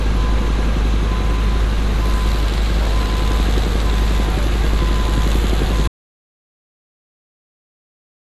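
A recording of sounds that suffers an audio dropout to silence at 5.88 s, cutting to silence with no room tone through to the end, likely from a lost input or link.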